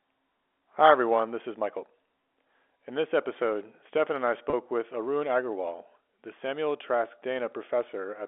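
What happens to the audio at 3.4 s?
Nothing goes wrong at 3.4 s: the speech carries on intact through the ordinary telephone band of G.711 coding, with no dropout, click or distortion at that point.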